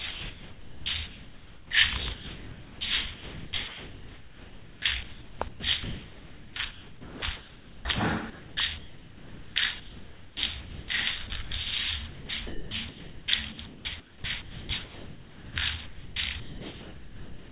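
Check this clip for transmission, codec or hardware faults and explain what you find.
Yes, there's a clear problem: the sound keeps getting swapped out for synthetic background noise, and it's likely the sender's voice detector at work. Across most of the clip it comes out choppy. All of this sits inside a phone-band call path that tops out at 4 kHz, which fits G.711 A-law.

Sound chopped by the voice detector shows up at 0.11–1.7 s, 3.14–7.85 s, 8.3–10.88 s, 11.27–11.51 s, 12.08–15.56 s and 15.86 s to the end. Within each stretch the detector keeps toggling between sending and not sending, so the quieter parts get replaced by comfort noise. That's about 1.4 s lost in the first stretch, 3.75 s in the long one, and just 0.12 s in the short one around 11.3 s. What you hear is stuttering sound with holes filled by noise.

Sound dropped by the voice detector happens once, at 2.15–2.81 s. Here the detector treated the sound as background and simply stopped sending. 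The receiver then filled all 660 ms with steady comfort noise, so the sound gives way to steady noise and only returns when the detector triggers again.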